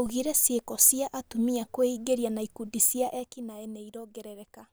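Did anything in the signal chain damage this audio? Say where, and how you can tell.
Yes. From 3.0 to 3.38 s there is zipper noise while the speech is being turned down. A fine ticking rides on the sound as the level drops. Each tick marks a jump of about 2 dB, at around fifteen steps a second, for a total fall of roughly 10 dB. The gain is applied in discrete steps at the driver or buffer stage, with no smoothing between them. Each abrupt step puts a small click into the waveform.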